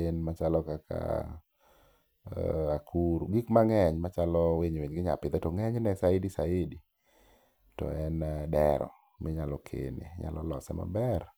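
No technical faults can be heard anywhere in this speech recording. There is nothing in the signal chain that calls for comment.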